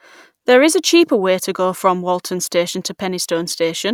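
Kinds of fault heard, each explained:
No technical fault can be heard anywhere in the recording. There is nothing here to list or explain.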